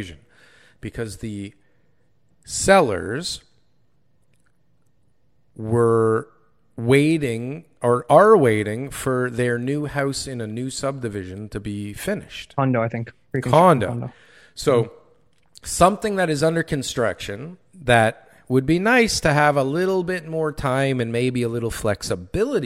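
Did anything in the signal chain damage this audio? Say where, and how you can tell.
No, nothing along the chain from capture to playback has audibly damaged this speech recording.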